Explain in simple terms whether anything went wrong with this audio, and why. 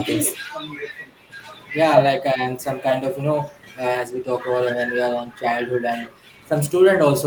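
Something did go wrong: a faint echo leak appears three times, at 1.3 to 1.69 s, 2.62 to 2.83 s and 5.34 to 5.42 s. In each, a quiet copy of the speech returns 929 milliseconds (just under a second) after the original. The likely cause is a far-end loudspeaker whose sound reached its microphone, with the echo canceller failing to remove all of it, so short scraps were sent back.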